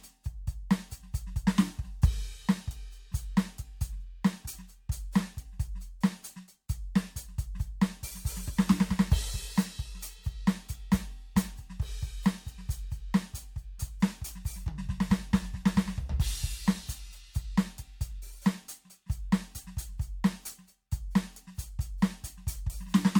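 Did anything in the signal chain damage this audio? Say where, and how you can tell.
Yes, generation loss at the codec stage, throughout the music. It sounds swirly, hollow and smeared, with blurred attacks, likely from about seven MP3 re-encodes near 98 kbit/s. A spectrogram would show flickering holes and speckled noise, and the waveform softened transients.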